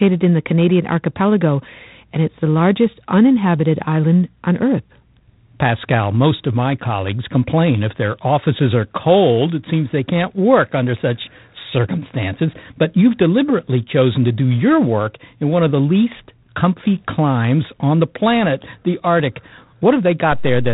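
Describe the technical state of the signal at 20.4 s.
A DC step begins at 20.32 s and runs to the end of the clip at 20.74 s, so 20.4 s sits just inside it. The waveform's zero line jumps to a new level, as if an input carrying an offset had been switched in. The jump itself is heard as a low thump or click at 20.32 s, while the speech carries on across the offset without any change in its content or level.

G.726 ADPCM coding also affects this moment, as it does the whole recording. Each sample is sent as a small coded difference from an adaptive prediction, and with so few bits per sample the prediction error comes through as a harsh, rasping hiss that swells and fades with the speech. The grain points to the 24 kbit/s mode. Nothing above 3.8 kHz survives, so the sound is narrow and telephone-like.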